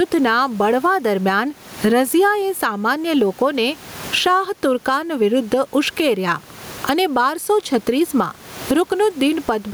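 Gain pumping runs through the whole clip: the level breathes in step with the speech, swinging by around 20 dB. In the pauses the room noise sits about 35 dB under the speech. Loud and quiet syllables end up closer in level, giving a flattened, squeezed sound, likely from the input gain being set far too high with a fast limiter clamping down on each loud moment.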